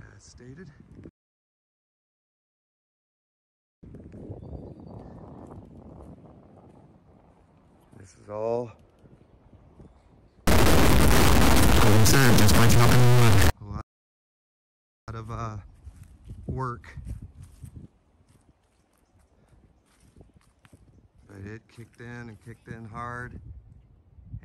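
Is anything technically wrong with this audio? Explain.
Yes, there are three faults. A rebuffering stall runs from 1.09 to 3.83 s: the player ran out of downloaded audio, so the sound drops to silence for about 2.74 s, then resumes exactly where it stopped. From 10.47 to 13.50 s a stuck bit produces distortion, with hiss filling the quieter moments. The likely cause is one data bit held at a fixed value, which throws roughly half the samples off by that bit's weight. A second rebuffering stall, from 13.81 to 15.08 s, inserts about 1.27 s of silence before playback picks up seamlessly again.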